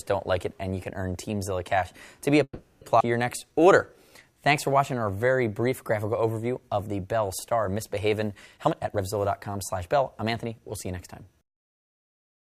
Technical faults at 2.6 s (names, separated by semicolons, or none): call audio freeze